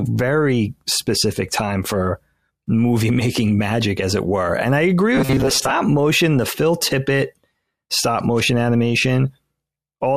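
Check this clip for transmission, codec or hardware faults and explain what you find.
One fault. From 5.15 to 5.73 s, after "I agree" and before "motion the", there is robotic sound from repeated short buffers. About half the audio is likely replaced by repeats of a 7.5 ms chunk, forcing a metallic 133 Hz buzz.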